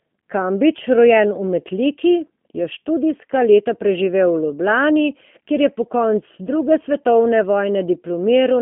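The speech has passed through a G.729 codec for its whole length. The sound is rebuilt from a vocal tract filter and sparse pulses, which fits an 8 kbit/s stream, so it comes out slightly rough and synthetic, confined to about 150 Hz to 3.4 kHz, with nothing above 3.6 kHz.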